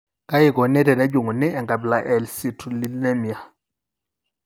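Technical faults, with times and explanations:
1.10 s and 2.85 s, bit error spike: a single sample jumps, to about -22 dBFS then about -4 dBFS, and returns at once, giving a broadband tick unrelated to the speech, unlike a splice click.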